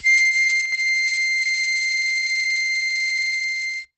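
A short music clip, heavily damaged throughout by what is likely Opus compression. Nothing is left above 8 kHz. The music sounds muffled and hoarse. That fits the encoder running in its SILK speech mode at a very low bitrate, around 12 kbps. Between 0.65 and 0.72 s, one channel drops out. The level falls abruptly by about 6 dB, the likely result of one stereo side vanishing before the mono sum. From 1.86 s to the end there is a time-stretched section. The pace suddenly runs about 1.86 times faster while the pitch holds. It sounds rushed, likely because short pieces were dropped to squeeze the audio.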